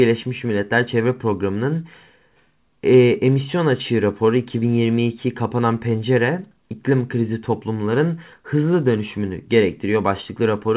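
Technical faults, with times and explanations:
No technical faults can be heard in this speech.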